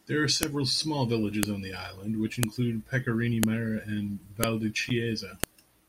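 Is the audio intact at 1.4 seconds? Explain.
No. At 1.43 s, where a joined piece of the speech stream begins, its WAV header wasn't stripped, so a file header played as audio. Those few dozen bytes become samples, producing a sharp, loud click just before "on the island which".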